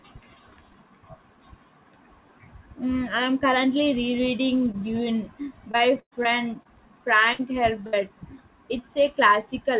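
At 4.72 to 4.76 s and again at 6.63 to 6.67 s there is short concealed packet loss: about 20 ms of the call arrived too late. The receiver bridged each hole by extending the preceding sound, so it comes across as a brief smear or wobble.

From 5.72 to 6.27 s, repeated packet loss (robotic sound) sets in. There are four gaps totalling about 180 ms, the longest 117 ms, so roughly a third of the stretch is patched. Because the patches follow each other so closely, the effect is a sustained choppy quality rather than isolated glitches.

At 7.33 to 7.41 s and 7.87 to 7.95 s, each burst of packet loss removes about 60 ms at once. The concealment holds the last sound and fades it, giving a brief buzz or fading hiss before the audio resumes with that piece gone. This single held-and-faded gap is what separates it from the scattered chop of the earlier stretch.

Throughout, the call path's narrowband sound, with nothing above 4 kHz, fits a G.711-type codec.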